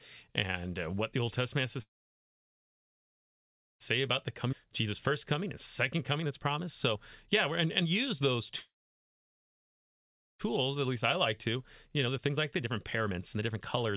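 Call audio freeze at 1.82–3.82 s, right after "has to", and again at 8.59–10.41 s: the sound trails off into near-silence for about 1.9 s and then 1.7 s, and resumes exactly where it stopped, with nothing lost. The likely cause is packets held up in transit, so the jitter buffer ran dry and playback waited for them. Jitter buffer speed-up at 4.0–5.5 s, 5.99–8.52 s and 10.49–13.96 s, ending just before "and the": the speech runs hurried at unchanged pitch, at about 110%, 116% and 117% of normal rate. The receiver is trimming tiny pitch-period slices to shed the backlog built up by those delays, roughly 150 ms, 400 ms and 700 ms in total. Skip ahead at 4.52–4.54 s: playback jumps forward almost seamlessly, dropping roughly a second and a half of speech, as audio is dropped while later audio is already waiting. Throughout, the speech passes through a telephone-band call path with nothing above 4 kHz, which fits G.711 mu-law coding.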